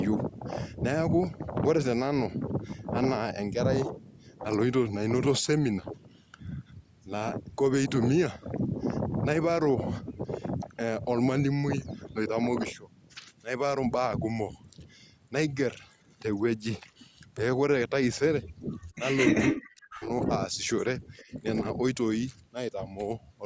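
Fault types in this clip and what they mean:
Speech suppressed in double talk: the voice nearly vanishes from 19.48 to 20.12 s, then dips briefly near 21.3 s, likely an echo canceller muting overlapping talk.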